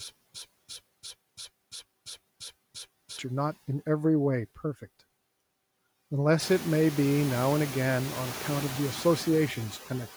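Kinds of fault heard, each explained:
Stutter with silent gaps: From the start to 3.19 s, a 156 ms burst repeats every 343 ms, with 187 ms of digital silence after each. It is already under way when the clip begins. A stalled stream replaying its last fragment at each retry is the likely cause. The missing audio never returns.
Noise suppressor artifacts: Throughout, a suppressor pulls down bands it judges to be steady noise, by about 16 dB. The background drops in the pauses and comes back under the speech. The room noise swells around 6.5 s, and the suppressor keeps working on it.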